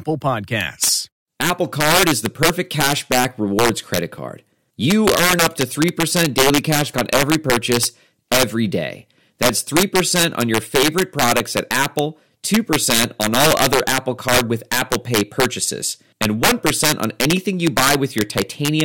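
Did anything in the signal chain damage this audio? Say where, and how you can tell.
Yes. There's integer overflow in the sample-format or fixed-point gain stage, and it runs through the whole speech clip. The loudest peaks crack violently, much harsher than clipping. The signal was pushed about 7 dB past full scale with no limiting, so around one percent of samples overshot the largest integer and wrapped to the opposite sign. Each of those jumps swings across the full range, which is why you hear sharp snaps instead of flattened, buzzy tops.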